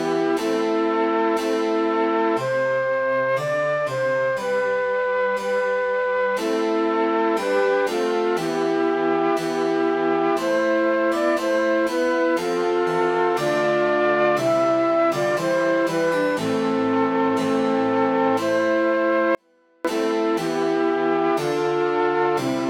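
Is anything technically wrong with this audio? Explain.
Yes. From 19.35 to 19.85 s there is an audio dropout to a faint residue. The signal cuts out abruptly for about half a second. Only a faint trace remains, about 40 dB below normal. The likely cause is a brief loss of the source while the downstream path stayed live.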